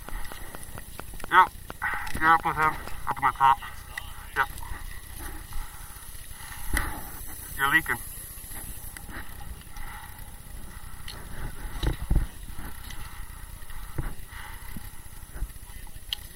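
From 0.09 to 3.12 s a train of clicks ticks over the sound at a regular 4.3 per second, around fifteen in all, peaking roughly 10 dB above the signal. Similar-shaped pulses like these likely come from electrical interference or a faulty connection or power supply.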